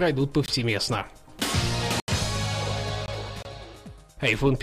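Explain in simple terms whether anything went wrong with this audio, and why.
The audio drops out four times. Three of these are blocks of digital silence, at 0.46 to 0.48 s, 2.00 to 2.08 s and 3.06 to 3.08 s. The sound is cut to total silence for 20 ms, 80 ms and 20 ms, with no fade. The short gaps sound like quick holes and the longer one like a brief hole. This usually happens when the program doesn't deliver sound in time.

At 3.43 to 3.45 s there is a silent gap of about 25 ms, and then the sound picks up again. This is likely a Bluetooth stall: interference delayed the wireless data, the headphones ran out of sound, and playback paused until the data arrived.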